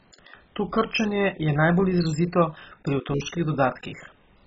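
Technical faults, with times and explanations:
throughout: MP2 compression. The speech sounds dull and gurgly, with heavy granular distortion and nothing above 7.6 kHz, which fits Layer II coding near 16 kbps likely starving upper sub-bands of bits. A spectrogram shows a flat ceiling with patchy, flickering blocks beneath it.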